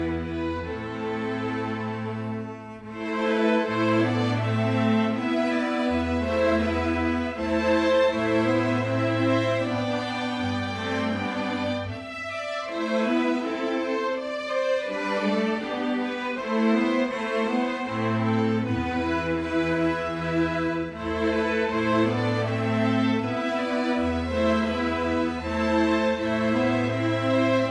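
No faults turn up anywhere in the recording.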